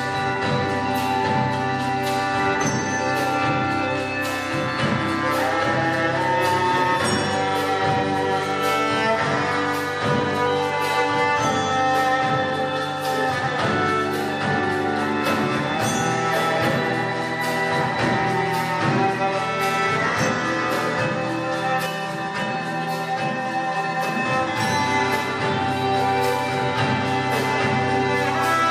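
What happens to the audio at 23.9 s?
At 23.9 s the audio sits inside a stretch of channel delay (comb filtering) running from 21.86 to 24.25 s. One channel lags the other by about 5 ms, and when the two are folded to mono, the shared content cancels at regular intervals, starting near 100 Hz. The sound turns hollow and phasey. A spectrogram shows fixed horizontal dark bands stacked evenly up the frequency axis, and the waveform may look slightly smeared or doubled.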